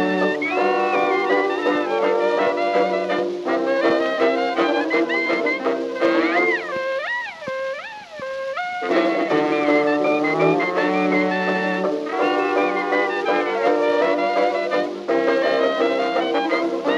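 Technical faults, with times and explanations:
No technical faults can be heard anywhere here.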